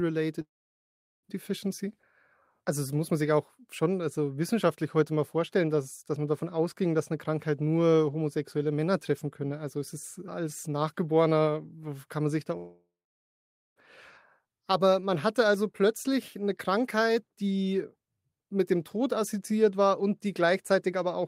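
A likely long network dropout stops the audio at 0.41–1.25 s and after "kann man sich da" at 12.57–13.78 s: a brief fading buzz, then silence, and the missing speech never returns.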